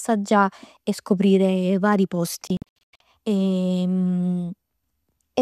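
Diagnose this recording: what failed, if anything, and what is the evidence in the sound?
A digital broadcast dropout in the reception chain interrupts the speech between 2.47 and 3.01 s. The sound does not stop in one block. It breaks into several short silent holes, the longest about 96 ms. Together they remove about 336 ms of audio, spread over roughly 530 ms. The receiver was losing frames or rejecting corrupt ones and muting until valid data resumed. The hole sizes point to frames of around 24 ms. The speech sent during the gaps is gone.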